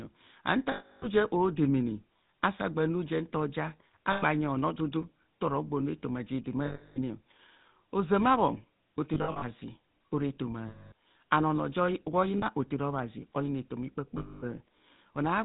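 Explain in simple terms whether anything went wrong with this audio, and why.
Two problems can be heard. The first affects the whole recording: the speech has been through the GSM full-rate codec, the original mobile-phone voice coder. It rebuilds the voice from a simple model of the throat and mouth driven by regular pulses, and it discards everything above 4 kHz. That is why the voice sounds buzzy, gravelly and muffled from start to finish. The damage is plainly audible.

The second problem is lost GSM frames. When a chunk of the signal fails to arrive, the decoder repeats the last good sound at a falling level, which produces a brief rough, metallic ringing. This happens seven times: 0.72 s, just before "je odemene asaagba nujento" (about 300 ms); 4.12 s (100 ms); 6.66 s, right after "ntoro gbonu etoma je" (300 ms); 9.14 s, after "ozama bhon" (gaps totalling 180 ms spread over 280 ms, none longer than about 70 ms); 10.68 s (240 ms); 12.38 s (40 ms); and 14.18 s (240 ms).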